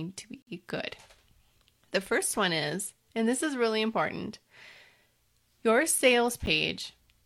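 At 0.42 to 0.47 s and again at 6.46 s, a gap between stream segments cuts hard-edged silence into the speech, about 50 ms and then 10 ms, six seconds apart. Mismatched segment timestamps leave holes the player pads with silence. The waveform shows flat-line dropouts, and the spectrogram shows clean vertical blank columns.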